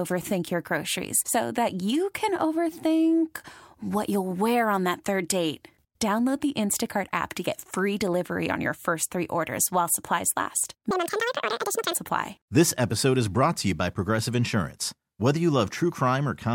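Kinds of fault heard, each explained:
Audio read two samples at a time (double speed): Each pair of samples is taken as one frame, as if the stream were stereo or twice as wide. After "orders while supplies last", the speech runs twice as fast and 12 semitones higher.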